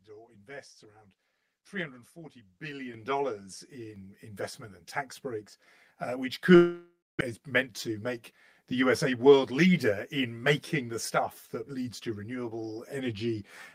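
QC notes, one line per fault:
throughout: channel delay (comb filtering). One channel lags by around 10 ms before the mono sum, giving a hollow, phasey tone. The spectrogram shows fixed, evenly spaced notches from near 40 Hz upward.
2.94 s, 3.96 s, 6.18 s: microphone volume stepped up. Input gain jumps by about 9, 5 and 3 dB, lifting voice and background together. The waveform envelope widens abruptly at each point.
6.55–7.23 s: long network dropout. A likely gap in arriving packets was concealed with a fading buzz, then about 260 ms of near-silence. Roughly 0.4 s of audio never plays, and the waveform shows a decaying smear before a flat stretch.
7.40–10.44 s: jitter buffer speed-up. The receiver trims pitch-period slices to cut about 0.2 s of delay, so playback runs at 107% speed with unchanged pitch. The sound is hurried, and the spectrogram shows compressed syllable spacing.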